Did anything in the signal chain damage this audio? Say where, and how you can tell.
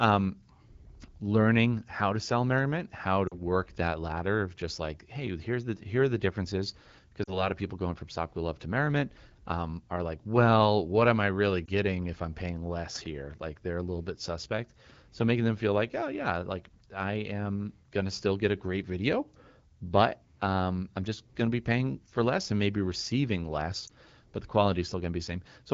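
Yes, there are lost AMR speech frames on the radio link at 3.28–3.42, 7.23–7.48, 11.66–11.68 and 23.87–23.91 s. Brief dips and warbles reveal the damaged frames: the decoder repeats the last good pitch and vocal-tract settings at fading gain.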